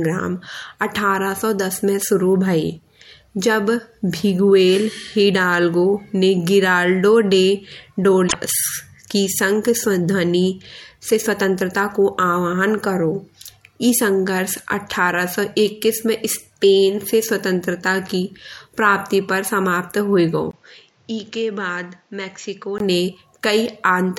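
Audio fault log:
8.24–8.35 s, damaged data in a compressed stream: corrupted bytes in the encoded speech make the decoder misread frames and lose sync while it hunts for the next valid frame header, so a brief squawk or blip cuts through the speech for about 0.11 s.
20.51–22.80 s, input switched to a poorer device: the recording likely moved to a lesser microphone, after a 20 ms gap. Nothing above 7.6 kHz gets through, so the speech turns duller and noticeably quieter, with a new background noise sitting well beneath it.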